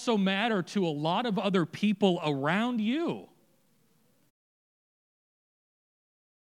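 No faults in this speech clip; the only level change is a deliberate, smooth fade-out near the end with no click or hard edge.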